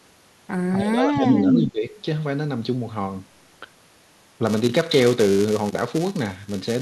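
From 0.76 to 1.85 s the speech dips by about 15 dB for roughly a second. This is likely speech suppressed in double talk, with the echo canceller turning down the local talker while both sides spoke.

Within that stretch, from 1.25 to 1.54 s, a delayed copy of the speech arrives 267 ms late and about 5 dB above the speech itself. This is likely an echo leak, where loudspeaker pickup got past the far end's canceller and was sent back.

From 4.46 s to the end, a steady 345 Hz buzz rides on the speech and follows its level. This is a filter restarted on every block, which fits a 128-sample block, with each block starting from silence and leaving a small transient.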